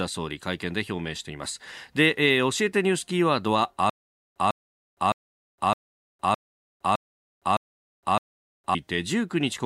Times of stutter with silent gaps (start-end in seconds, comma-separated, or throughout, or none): 3.90-8.75